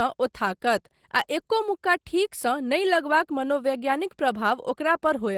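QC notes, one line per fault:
throughout: Opus voice compression. The speech carries plainly audible codec damage: a hoarse, slightly robotic grain from coarsely coded excitation. The band itself isn't narrowed, so this is hybrid coding: the linear-prediction layer handles content below 8 kHz and a thin transform layer fills in above it. The degradation level points to roughly 16 kbps, with 20 ms frames.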